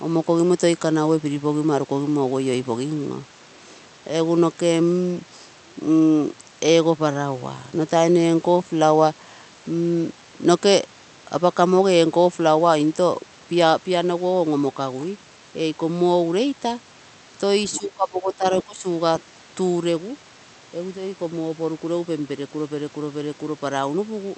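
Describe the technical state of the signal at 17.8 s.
The echo canceller likely left part of the far end's loudspeaker sound in the microphone signal, so the other side's voice is leaking through from 17.70 to 17.78 s. The residual is short, about 80 ms, and sits well below the talker, around 15 dB down. It comes through as a faint scrap of a second voice just before the talker's level changes, too brief to follow as speech.

Right after, from 17.79 to 18.45 s, speech is suppressed in double talk. Both ends were active at once, and the canceller likely could not tell the near talker from the returning echo, so it attenuated the whole signal. The talker's voice sags by as much as about 15 dB over roughly seven tenths of a second, sounding pulled back before recovering at 18.45 s.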